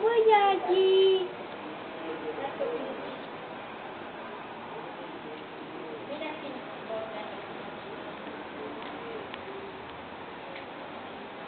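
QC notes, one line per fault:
2.17–4.73 s, call bitrate drop: the sound turns coarse and rough for about 2.5 s, then clears. The call's bandwidth estimate fell and the encoder was given far fewer bits, which fits a drop from roughly 64 to 19 kbps.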